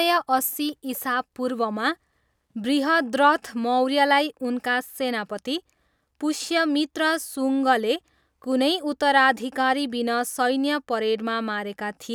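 No technical faults can be heard anywhere in this speech recording. Nothing in it calls for a timestamp or a closer look.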